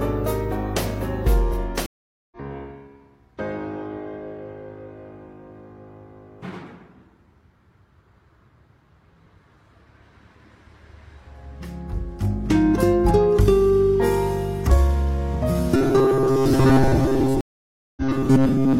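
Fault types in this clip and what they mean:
Stream reconnect: The connection drops and the player restarts its decoder partway through the stream. This happens twice, with a gap of about 0.45 s from 1.86 s and about 0.56 s from 17.41 s. Each time the sound comes back roughly 0.3 s further on, so a short stretch is missing rather than repeated. The fresh decoder start, with its brief mute or fade-in, separates this from a simple dropout, where the sound resumes exactly where it stopped.
Robotic sound from repeated short buffers: From 15.76 s to the end, the sound turns into a rigid, metallic buzz locked at 134 Hz that only loosely follows the underlying audio. The likely cause is the player looping its last few milliseconds of audio while new data arrives too slowly. A buzz at that pitch fits a loop of about 7.5 ms. Most of the material in this stretch is a repeat, and the real audio in between is skipped. 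The steady imposed pitch separates it from ordinary codec distortion.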